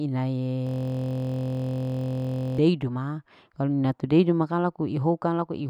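From 0.67 to 2.59 s, a system hang loop repeats one 23.2 ms slice of speech, fitting a 1024-sample buffer, producing a 43.1 Hz buzz with evenly spaced harmonic lines and identical repeating waveform cycles.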